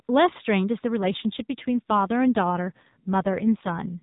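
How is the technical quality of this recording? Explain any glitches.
The recording is narrowband mobile speech through the AMR codec, with nothing above 4 kHz, and it has one fault.

From 1.0 s to 3.95 s the voice turns rougher and more synthetic, with no gap or band change. This is an AMR rate drop: the network lowered the codec rate, which fits a fall from 12.2 to about 5.9 kbps.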